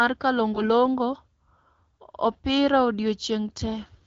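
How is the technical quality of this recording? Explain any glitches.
The recording carries one short glitch, from 0.54 to 0.68 s: AMR bit errors. A span that fits about seven codec frames arrived with roughly one bit in twenty flipped in the less protected part of each frame, while the important bits still checked out. The speech keeps its pitch and loudness, but the excitation pulses and fine spectral values are wrong, so it turns briefly hoarse, scratchy and gargly. The underlying AMR wideband coding sounds like a mid rate, with clear speech up to about 6.4 kHz and shaped noise filling in up to 7 kHz.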